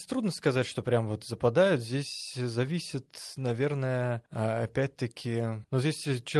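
Listening to this speech recording, which came through a call connection, nothing stood out as a technical problem.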